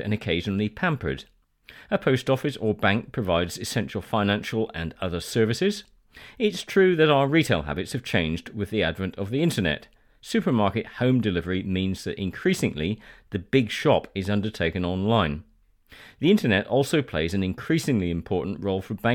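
No technical faults are audible.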